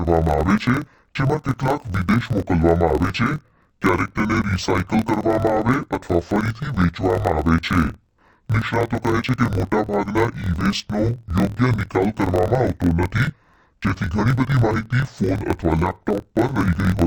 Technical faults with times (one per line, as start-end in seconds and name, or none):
0.00-17.06 interleaved audio read as planar